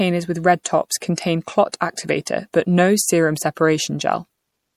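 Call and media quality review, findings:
Speech, whole clip: watery, swirly texture, s sounds chirpy and metallic. Likely MP3 compression at a low rate, around 64 kbps. Encoder starved of bits, drops weak spectral lines, which flicker frame to frame.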